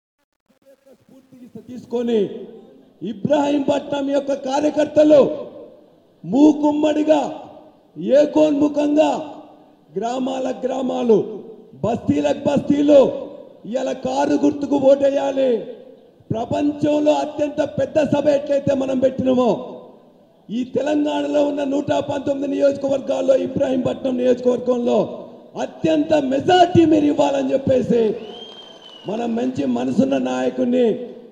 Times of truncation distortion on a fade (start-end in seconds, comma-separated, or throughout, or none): 0.00-2.15